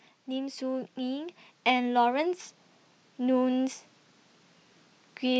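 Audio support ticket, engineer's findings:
AGC on input path ramping gain upward, 0.25 to 2.42 s. Automatic gain rising: controller judged input level too low and raised gain by about 5 dB over roughly two seconds. Heard as speech and background noise floor swelling together, a slow level climb rather than a step. Probable component: capture-side AGC stage.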